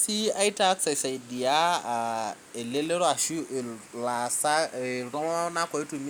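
A speech recording with nothing technically wrong to report.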